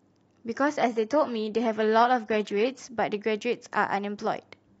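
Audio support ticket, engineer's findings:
Adaptive stream at a lower bitrate, 0.81–2.81 s: speech abruptly degrades, codec artefacts rise, no gap. Player dropped to a low-bitrate rendition during a throughput dip; sound fits a switch from 96 kbit/s AAC to 20 kbit/s HE-AAC.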